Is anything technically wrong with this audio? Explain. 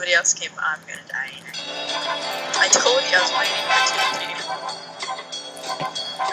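No, nothing technically wrong stands out anywhere in this recording.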